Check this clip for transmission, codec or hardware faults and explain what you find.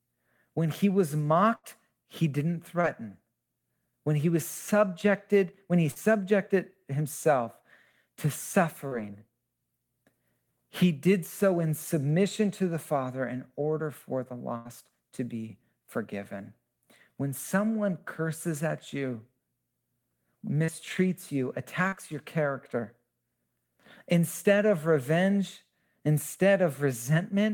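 Two kinds of packet-loss fault appear in this speech: two longer bursts and five short concealed drop-outs.

Burst of packet loss, at 1.55 to 1.65 s (between "he was" and "he didn't") and 14.57 to 14.67 s. About 80 ms of audio failed to arrive in time each time. The receiver prolonged the last sound and let it fade, so a held buzz or thinning hiss replaces the lost audio, and speech resumes with that stretch gone. The fading tail and the skipped material set it apart from the shorter drop-outs.

Short concealed packet loss, at 2.81 to 2.85 s, 5.91 to 5.98 s (after "was subjected when he"), 8.88 to 8.93 s, 20.65 to 20.70 s, and 21.88 to 21.94 s (just before "your character"). Between 20 and 40 ms went missing each time. The decoder patched each hole by extending the preceding pitch or noise and then blending back into real audio. This leaves a brief smear or wobble rather than an audible fade, and a consonant may vanish.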